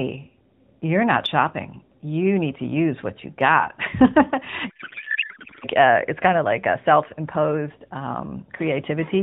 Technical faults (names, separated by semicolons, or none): codec payload misread